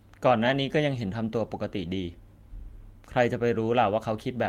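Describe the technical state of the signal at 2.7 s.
At 2.7 s the speech signal is intact, with no audible fault at that moment.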